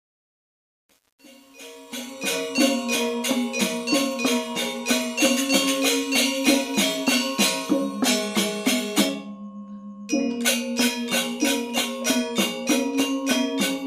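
Truncation distortion on a fade runs from 0.0 to 2.35 s, across the fade-in. The gain stage shaping the fade keeps too few bits, consistent with about 8-bit resolution, and applies no dither. At the lowest levels the waveform collapses into a handful of coarse square steps. From 0.0 to 2.19 s the sound is gritty before the level rises.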